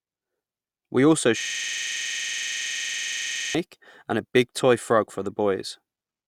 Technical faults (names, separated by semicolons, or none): system hang loop